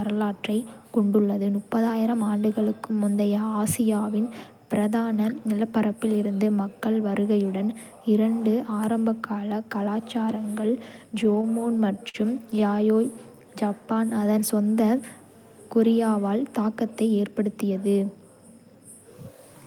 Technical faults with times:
11.15-12.81 repeated stalls (stutter)
13.35-14.33 jitter buffer slow-down
16.29-17.93 jitter buffer speed-up

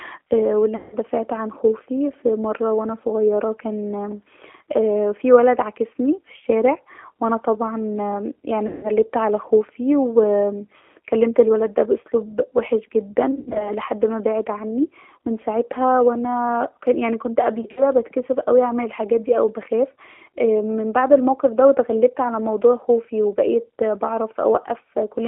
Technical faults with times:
0.00-25.28 G.729 codec
0.76-0.97 VoIP packet loss concealed by the speech codec
8.67-8.89 VoIP packet loss concealed by the speech codec
13.31-13.72 VoIP packet loss concealed by the speech codec
17.61-17.84 VoIP packet loss concealed by the speech codec

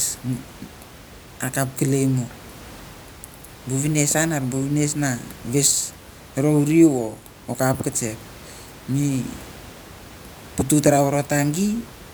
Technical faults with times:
none

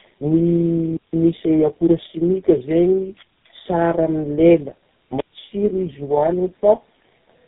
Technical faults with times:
0.00-7.48 tandem speech coding

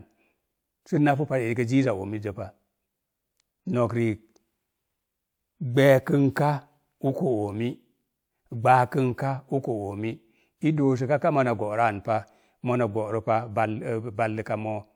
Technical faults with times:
none

